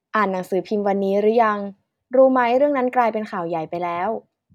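Nothing stood out on listening to this speech recording.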